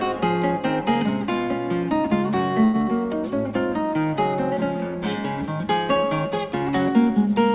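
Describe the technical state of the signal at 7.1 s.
At 7.1 s the signal is intact, with no fault present, only the narrowband sound of the call path with nothing above 4 kHz, which fits a 64 kbps G.711 A-law codec.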